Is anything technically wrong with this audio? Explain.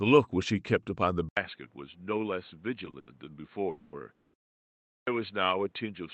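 Yes, this speech clip has several faults.

From 1.29 s to the end, the sound turns dull and boxy after about 80 ms of silence, likely because the input switched to a poorer device. Nothing passes above 4.3 kHz, the level drops about 5 dB, and a new noise floor appears roughly 40 dB down. On a spectrogram the energy above 4.3 kHz stops abruptly and a faint band of noise fills the floor.

At 2.90 s and again from 2.99 to 3.09 s there are short stalls from a late packet. Each time the jitter buffer ran dry, the receiver stretched the last sound for 30 ms and then 80 ms, and playback resumed with nothing lost. Each is heard as a sound held too long, with a slight buzz or dip, and on a spectrogram it shows as a smeared, repeated frame pattern.

From 3.71 to 3.95 s and from 4.15 to 4.36 s there are call audio freezes, likely caused by packets held up in transit. The receiver filled 220 ms and then 190 ms by extending the last sound into a fading buzz or hiss, with about 10 ms of silence in the second, before continuing where it stopped. 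On a spectrogram these appear as flat horizontal streaks that fade out.

At 4.89 s, after a 0.63 s pause, there is a clipped start after a pause. The output device was slow to wake, so about 180 ms of the next sound is swallowed and it begins abruptly. The waveform jumps from flat straight into the sound, with no onset.

The Opus call path limited to 8 kHz can also be heard.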